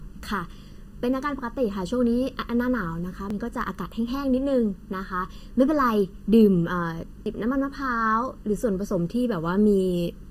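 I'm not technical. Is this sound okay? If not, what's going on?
No. The whole clip has channel delay (comb filtering). One side of the recording arrives slightly late, under a thousandth of a second. When both sides are combined, some tones cancel out, starting around 700 Hz. That makes the speech sound hollow.

There are also two brief skips, at 3.30 and 7.26 seconds. A tiny bit of sound, a few hundredths of a second, vanishes each time. This is likely audio missing between chunks, which fits a recorder saving in pieces about four seconds long.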